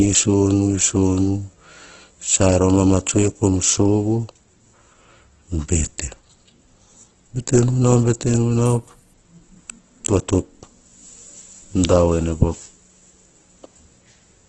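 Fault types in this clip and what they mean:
Opus compression: Throughout the clip the speech sounds heavily grainy, rough and noisy, and nothing is present above 12 kHz. This points to a likely cause of Opus coding in its music (CELT) mode at a low rate, which fits about 12 kbps. That mode keeps each band's overall energy. When bits run short it fills the fine detail with folded copies of lower bands or with noise, so the damage is roughness, not swirling gaps.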